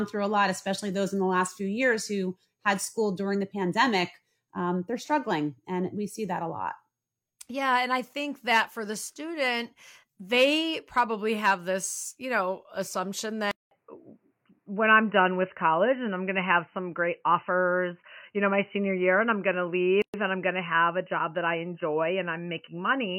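A speech recording goes abruptly dull and boxy at 13.51 s, just after "this you know assumption". A silence of about 200 ms opens at that point, and from there to the end the sound has nothing above 3 kHz, its level shifts by around 5 dB, and a faint new background noise sits far below the voice. The likely cause is an input switched to a poorer device: the recording jumped mid-take to a different, narrower-band microphone or headset path with its own tone, gain and noise floor. Within that later stretch, at 20.02 s, the voice drops out for about 118 ms, with its edges smeared, and then resumes exactly where it left off. That is a gap at a join of encoded pieces. Two separately encoded segments were joined without trimming, so the encoder's start-up delay and the padding of the final frame remain as dead air inside continuous speech.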